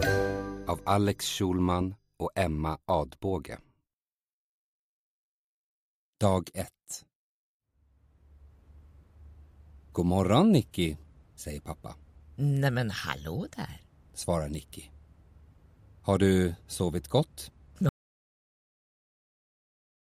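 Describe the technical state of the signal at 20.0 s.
At 20.0 s the signal is in an audio dropout to silence. The gap begins at 17.89 s and lasts to the end of the clip. The sound cuts off abruptly and never comes back. What follows is silence: no hiss, no room tone, nothing at all. That points to lost input while the recorder kept writing silence, likely from a disconnected device, a failed link or an accidental mute. Whatever sounded during that stretch is gone.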